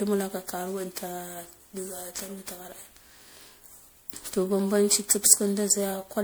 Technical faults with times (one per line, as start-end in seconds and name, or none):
0.00-6.23 generation loss